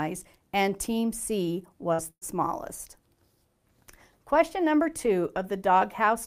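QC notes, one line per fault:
1.93–2.01 s, burst of packet loss: about 60 ms of audio is missing. The receiver fills roughly 51 ms of it by extending the last sound and fading it, producing a brief held, decaying sound before playback resumes further along.
2.10–2.24 s, burst of packet loss: a longer run of about 120 ms is lost. The concealment fill stretches over about 109 ms and fades into roughly 50 ms of silence.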